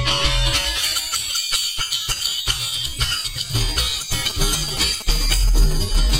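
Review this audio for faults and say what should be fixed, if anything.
A nearby 2G phone handling signalling traffic sent short groups of radio bursts, and the audio circuitry rectified that RF into the signal path. The result is GSM signalling bursts from 4.30 to 6.11 s: a galloping dit-dit-dit pattern of short buzzes pulsing at 216.7 Hz, sitting around 15 dB below the sound itself. The buzz is a rhythmic intrusion over the last two seconds. To prevent it, keep mobile phones well away from microphones, cables and preamps during recording, and use shielded, balanced cabling with RF filtering on inputs.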